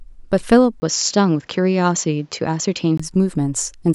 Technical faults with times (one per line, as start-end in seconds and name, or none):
0.80-2.99 input switched to a poorer device